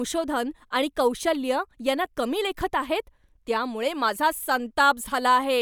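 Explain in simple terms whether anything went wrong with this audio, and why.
Nothing went wrong here: the speech signal comes through steady and intact, with no technical faults to be heard.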